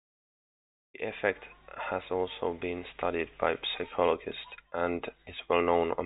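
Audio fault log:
Nothing to log here, just speech carried over G.711 telephone coding, which keeps it within the usual phone band with nothing above about 3.8 kHz.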